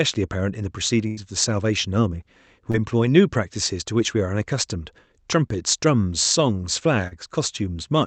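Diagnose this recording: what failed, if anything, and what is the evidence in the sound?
Network stage, a burst of packet loss on the call. From 1.07 to 1.19 s the sound does not simply drop out: the receiver keeps extending the last stretch of audio for roughly 96 ms, fading it as it goes, so it turns into a held buzz or hiss. When the real signal returns, about 100 ms of content is gone. That skip, with no stall and no catch-up, separates it from a buffer underrun in the driver, which would leave dead silence or a hard click and then carry on without losing material.

Also network stage, short concealed packet loss, twice: from 2.71 to 2.76 s, where about 26 ms is filled in for roughly 20 ms lost, and from 7.08 to 7.13 s, where about 38 ms is filled for roughly 40 ms lost. Each is heard as a brief smear or wobble, as the decoder extrapolates from the preceding pitch or noise and then crossfades back into the real audio. 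A dropped-sample glitch gives a sharp tick instead. The codec's coding noise and the band limit at 8 kHz sit underneath all three events.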